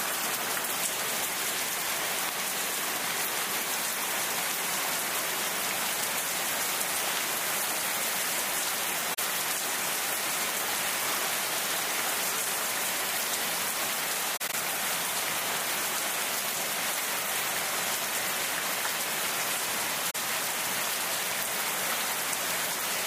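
AAC frame loss with muting at 9.14–9.19 s, 14.36–14.54 s (several short gaps) and 20.10–20.15 s: the decoder zeroes lost frames, giving soft-faded silences.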